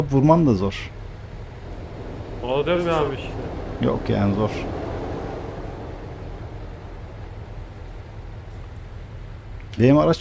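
Nothing stood out as a fault on listening to this audio.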